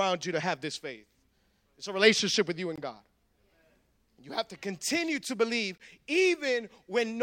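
Gap between chunks at 2.76–2.78 s and again at 5.78–5.80 s in this speech clip: each is a 20 ms silent hole, repeating every 3.0 s. The spacing fits audio delivered in 3-second chunks, with silence inserted at each join.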